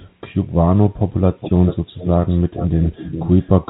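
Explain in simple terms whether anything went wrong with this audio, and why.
There's an echo leak in the speech. A tiny, faint scrap sneaks in right at the start, around 0.02 to 0.08 s, trailing about 0.28 s behind. The clearer ones run from 1.4 to 1.77 s and 1.94 to 3.49 s, where a quieter copy of the voice follows roughly 0.4 s late. Most likely someone on the call was on speakerphone, and their echo canceller let some of their loudspeaker's sound slip back through their mic.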